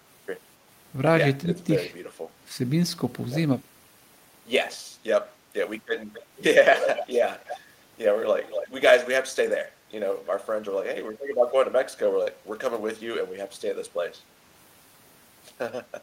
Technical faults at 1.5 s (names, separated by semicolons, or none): speech suppressed in double talk